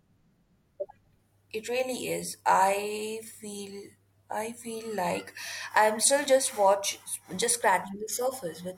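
No technical faults can be heard anywhere in the speech.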